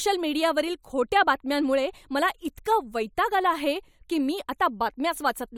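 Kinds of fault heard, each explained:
No kinds of fault are heard in this speech clip.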